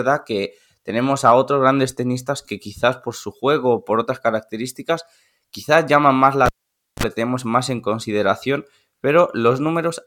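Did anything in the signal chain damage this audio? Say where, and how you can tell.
Yes. The damage is in the analogue wiring: a cable pulled and plugged in while live, between 6.46 and 7.03 s. A pop marks the disconnect, then the speech drops to near silence for about 0.52 s. As the plug goes back in, a short burst of 50 Hz mains buzz lasting about 39 ms appears while only the tip makes contact and picks up hum with no ground. A second pop follows as the full connection seats and the signal returns.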